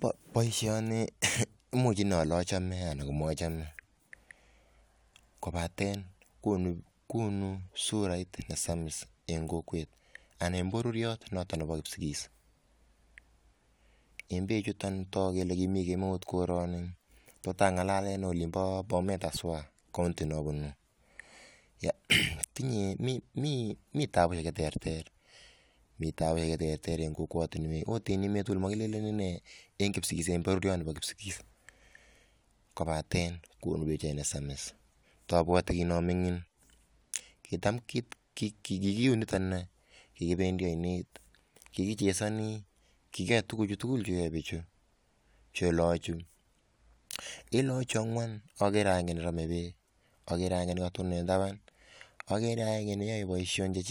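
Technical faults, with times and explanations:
No technical faults are audible anywhere in this speech recording.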